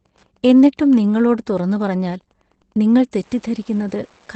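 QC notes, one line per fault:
Throughout, Wi-Fi interference: faint steady ticking about ten times a second, about 40 dB below the speech, from a nearby radio's 102.4 ms beacon being rectified.
Throughout, Opus voice compression: speech sounds muffled, hoarse and slightly robotic with nothing above 8.4 kHz, from coarse low-bitrate SILK coding, which fits roughly 12 kbps wideband.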